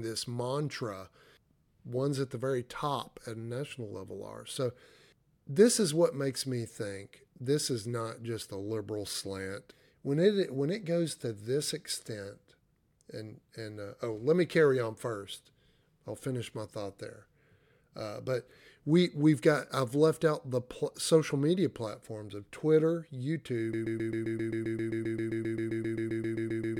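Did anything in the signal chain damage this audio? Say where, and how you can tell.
Yes. From 23.73 s to the end, the speech locks into a broken-record loop: a 132 ms fragment repeats exactly, back to back, about 23 times. This likely points to a stalled player or stream buffer re-sending its last held segment, so the speech that belonged there is lost.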